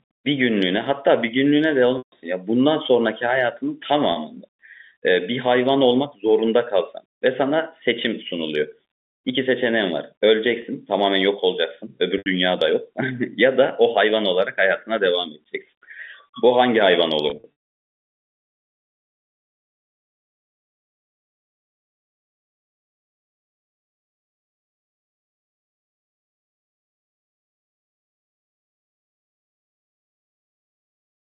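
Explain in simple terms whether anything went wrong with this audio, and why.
Packet loss with pitch repetition happens at 1.98 to 2.12 s, 4.12 to 4.16 s, 10.62 to 10.64 s, 12.18 to 12.26 s, and around 17.3 to 17.44 s. Pieces of the telephone-quality speech never arrived, so the receiver filled each gap by repeating the last stretch of sound, giving a brief buzzy, held tone. The longest, 140 ms near 2 s, starts fading toward silence. Near 17.3 s, several short gaps cluster within about a third of a second.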